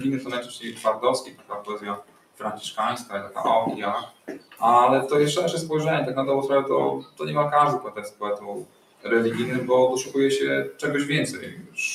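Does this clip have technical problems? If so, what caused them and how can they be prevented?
Yes. A noise suppressor applied to music or sounds stays on for the whole clip. It was built for speech, so it takes steady tones and ambience for noise. Their level swings by around 15 dB while attacks pass through. Prevent this by switching speech noise suppression off for non-speech material.

Sound cut by the noise suppressor appears at 0.24–0.85, 1.21–2.43, 3.03–3.37, 4.04–4.62, 7.01–7.21, 7.83–9.06 and 11.36–11.78 s. In these spans, steady or decaying sound is pushed down harder than the rest. The deepest drops reach about 8 to 16 dB. Disabling the suppressor, or using a music mode, prevents it.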